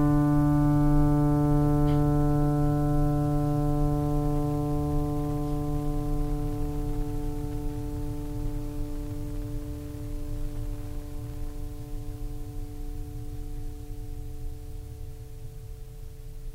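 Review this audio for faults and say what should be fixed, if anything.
Nothing here needs fixing; the music comes through without any technical faults to flag.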